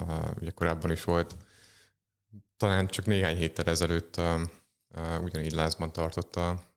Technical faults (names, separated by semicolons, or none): none